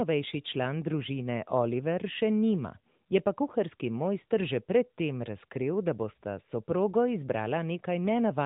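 No technical faults are audible.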